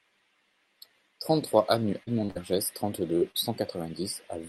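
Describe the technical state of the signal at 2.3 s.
Short concealed packet loss runs from 2.25 to 2.30 s. About 40 ms of audio never arrived, and the receiver covered it with 36 ms of sound extended from what came before, giving a brief smear. On a spectrogram the harmonics run on unchanged, with no new detail.

A burst of packet loss follows directly, from 2.30 to 2.37 s. Here 49 ms is filled by continuing and fading the last sound, so it becomes a held buzz or dying hiss. Another 40 ms of material is skipped. The waveform shows a shrinking envelope before the real signal resumes.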